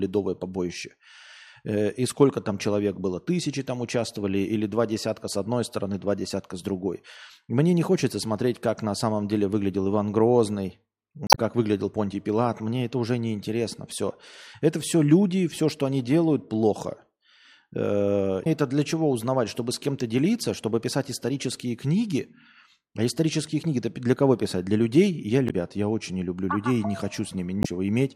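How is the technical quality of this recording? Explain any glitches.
The speech is interrupted by four short glitches from damaged data in a compressed stream. They fall at 11.27 to 11.37 s, 18.43 to 18.47 s, 25.46 to 25.51 s and 27.61 to 27.66 s. Corrupted frames make the decoder lose sync and hunt for the next header. Each event is a brief chirp or blip lasting 40 to 100 ms.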